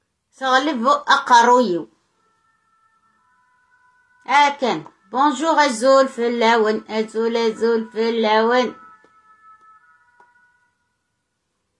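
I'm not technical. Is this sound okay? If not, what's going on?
Yes, it's fine: nothing in it sounds broken, glitchy or out of place, so there's nothing to worry about.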